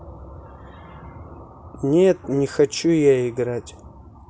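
Nothing in this recording trips any alarms: no dropouts, glitches or other technical faults turn up anywhere along its run.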